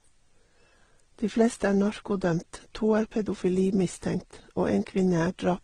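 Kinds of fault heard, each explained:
Transcoding between lossy codecs: speech stops at 11.9 kHz with mixed artefacts from different codecs heard together, unlike one codec's uniform texture, likely from several successive low-bitrate encodes.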